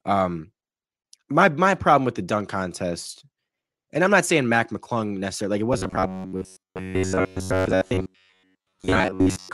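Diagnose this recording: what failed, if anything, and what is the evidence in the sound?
Driver or buffer stage. From 5.73 s, after "necessarily like it", speech becomes a rigid 93.8 Hz buzz: robotic sound from repeated short buffers, likely 11 ms chunks replayed in place of late audio.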